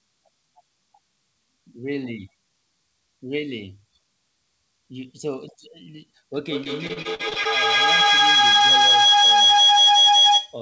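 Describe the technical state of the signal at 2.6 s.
At 2.6 s the speech signal is intact, with no dropout, distortion or other fault at that moment, just the usual band limit of the call path, with nothing above 8 kHz.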